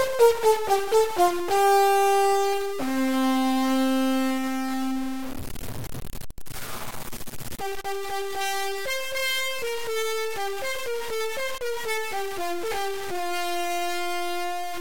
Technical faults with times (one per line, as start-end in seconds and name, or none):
0.00-14.81 stuck bit